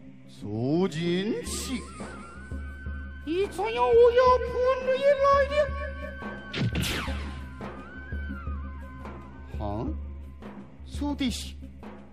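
No technical faults can be heard anywhere in the audio.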